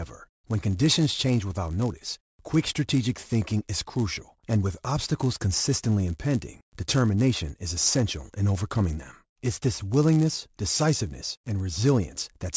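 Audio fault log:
Throughout, resampler restarted on every block: a steady 100 Hz buzz rides on the speech and drops away in pauses. Each 10 ms block was converted from 48 kHz to 16 kHz in isolation, so every block edge carries a small error, repeating at the block rate.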